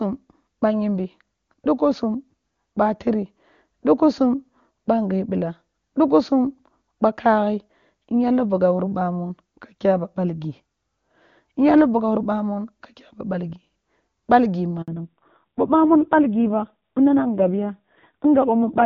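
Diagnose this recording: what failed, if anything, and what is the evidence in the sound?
A handover gap at the network stage: the speech cuts out from 14.82 to 14.88 s, a 60 ms hole with a quick decay rather than a click. Unlike a buffer underrun, it happens once and is followed by a lasting change in the sound, consistent with the call switching links.

A fallback to narrowband, also at the network and codec stage: from 14.88 s to the end, everything above 4 kHz is gone and the speech turns dull and rough. Before the switch, content reached about 7 kHz, which fits HD Voice at a high rate. The rasp after the switch points to a low-rate narrowband codec, around 5.9 kbit/s, rather than a simple low-pass filter, which would darken the sound without roughening it.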